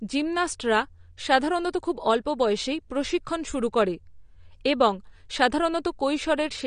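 Throughout, the speech is dull and cut off above 9.7 kHz, with a warbling fizz on sibilants, likely from AAC compression. A simple low-pass filter would dull it without that swirl.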